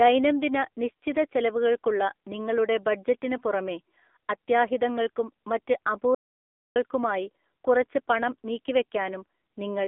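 From the start, the speech carries AMR narrowband mobile codec damage. Nothing passes above 3.7 kHz, and the band sits between roughly 250 Hz and 3.6 kHz. The voice sounds buzzy and synthetic, which fits a low AMR-NB rate near 7.4 kbps. It lasts the whole clip.

At 6.15 s, just after "ബഡ്ജറ്റിന് പുറമേ അത്യാഹിതങ്ങൾക്കും മറ്റ്", an audio dropout to silence begins. The sound cuts off mid-flow. No room tone remains. It returns at 6.76 s, so about 0.61 s is gone. The likely cause is a brief loss of input.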